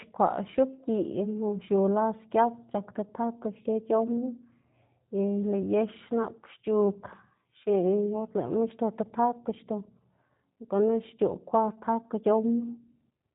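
From start to finish the speech carries G.729 codec damage, plainly audible: a rough, slightly synthetic texture with nothing above 4 kHz, which fits an 8 kbit/s stream. Unlike a simple low-pass filter, the voice itself sounds rebuilt rather than merely dulled.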